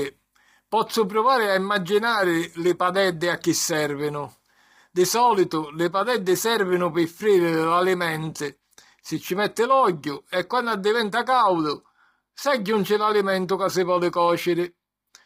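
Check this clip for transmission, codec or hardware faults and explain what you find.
There is one codec fault, and it runs through the whole speech clip: low-delay AAC compression. The voice sounds rough and grainy from start to finish, with a hiss-like haze filling the gaps between harmonics and a top band that sounds thin and synthetic. The likely cause is AAC-ELD, whose short frames resolve pitch harmonics coarsely. The heavy damage points to a low rate, around 24 kbps. On a spectrogram, harmonic lines look smeared and blurred, noise fills the spaces between them, and the upper band appears patchy and flattened.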